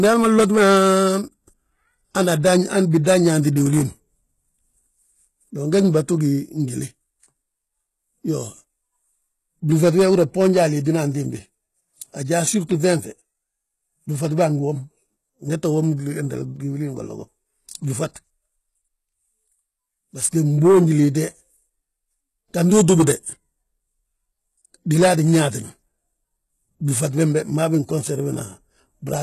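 Across the whole speech clip the treble sounds synthetic. Nothing reaches above 12.3 kHz. The upper band has a gritty, metallic edge, and s sounds lisp. This is likely HE-AAC compression, rebuilding highs from copied lower bands. The heavy damage fits a bitrate near 16 kbps.

From 3.04 to 3.06 s there is pre-echo, just before "yaanti diwilin". A short hiss of about 21 ms leads into the onset. Codec noise from the loud attack has spread back into the quiet moment before it, so the attack sounds smeared.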